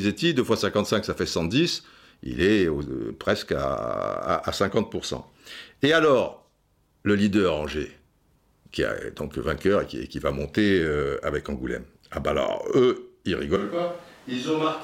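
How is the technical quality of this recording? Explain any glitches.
One glitch, near the end. At 13.56 s the speech suddenly turns hollow and roomy and stays that way to the end: a switch to a distant microphone, likely because the close mic's signal dropped out and a farther pickup took over. The level drops by about 5 dB, the bass thins, and room noise rises to roughly 25 dB below the speech. On a waveform the envelope steps down at that instant. A spectrogram shows weaker low frequencies and a higher noise floor filling the gaps between phrases.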